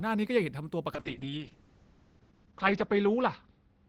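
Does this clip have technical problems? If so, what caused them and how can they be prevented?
Yes. From 0.95 s to the end there is a call bitrate drop: the encoder's rate falls from 32 to 7 kbps and stays at its lowest for about 1.5 s, so the speech turns coarse and watery, and the audio band narrows from 20 kHz to 8 kHz, leaving it muffled. Unlike packet loss, there are no gaps or glitches, just a continuous drop in quality. Prevention: set a higher minimum encoder bitrate and give the call more stable network bandwidth.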